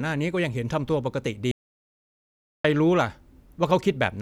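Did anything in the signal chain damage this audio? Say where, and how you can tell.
Yes. Audio dropout to silence, 1.51 to 2.64 s: the speech stops dead, leaving a flat-line waveform and blank spectrogram with no room tone, likely a lost input connection.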